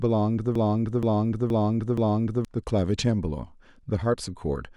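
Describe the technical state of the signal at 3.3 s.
At 3.3 s the audio is intact, with no technical fault audible at that point.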